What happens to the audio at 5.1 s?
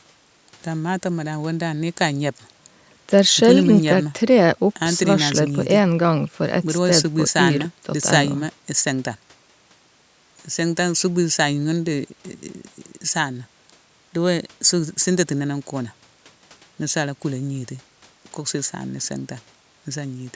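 At 5.1 s the speech runs on intact, with no dropout, click or distortion, only the ordinary call microphone processing that trims the lowest bass and leaves nothing above 8 kHz.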